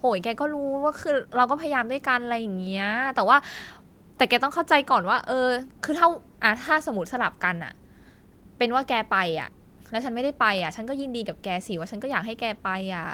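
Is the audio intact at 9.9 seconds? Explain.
No. At 9.9 s the speech sits inside a run of repeated timing corrections lasting from 0.07 to 13.01 s. The receiver keeps cutting short slivers to keep pace with audio arriving at 104% speed, heard as faint hiccups and a slightly unsteady tempo rather than gaps.

The cause is clock drift between sender and receiver: the sender's clock runs about 4 percent fast, so the jitter buffer keeps overfilling. Unlike random packet loss, the edits all go one way, removing audio, and keep recurring at uneven spacing across the whole clip.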